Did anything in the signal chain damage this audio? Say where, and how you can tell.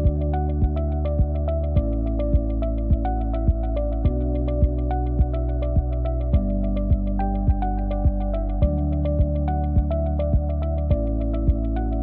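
No, none of the stages between capture and playback left an audible mark on this audio. Listening closely across the whole clip turns up nothing that points to damage anywhere along the chain.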